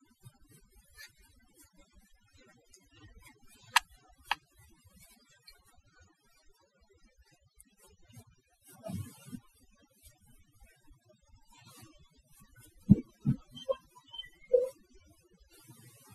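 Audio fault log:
Throughout: overdone noise removal, the denoiser pushed so hard that bands near its noise estimate vanish, leaving twinkly near-silence between phrases and taking quiet parts of the voice with them.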